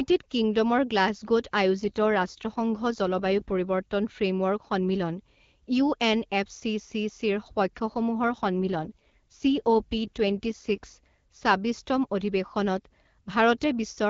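From 1.75 to 3.61 s and again from 7.76 to 10.92 s, the speech turns rougher and more synthetic, which points to an AMR rate drop, likely a step down from 12.65 to 8.85 kbit/s as the link weakened. The wideband AMR-WB sound around these stretches is clear apart from light codec coloring. Unlike packet loss or a fallback to narrowband, there is no gap or dropout and the bandwidth stays the same. Only the texture degrades, and it recovers when the rate returns.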